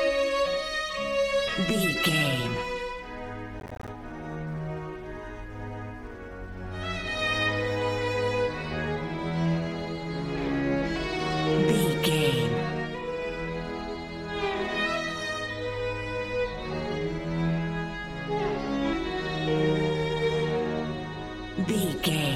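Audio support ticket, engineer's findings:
Gritty crackle burst, 3.60–3.89 s, clean gaps chopping the sound. Processor overload crackle: audio thread missing repeated deadlines, each dropped buffer (around 10 ms) output as silence.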